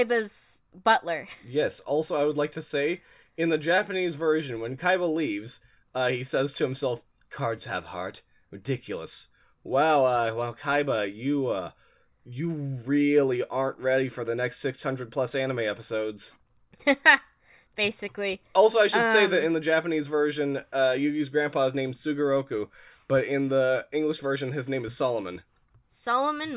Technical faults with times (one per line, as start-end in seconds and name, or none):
none